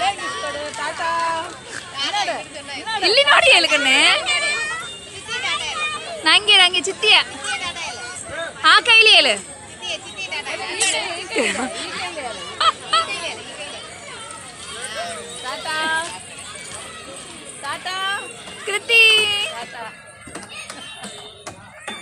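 From 14.29 s to the end, the resampler restarted on every block: each 10 ms block was converted from 24 kHz to 48 kHz in isolation, leaving an error at every edge. This gives a 100 Hz buzz under the sound, seen as evenly spaced waveform glitches and faint vertical lines 10 ms apart on a spectrogram.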